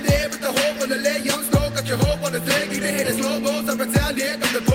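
No technical faults can be heard anywhere in this audio.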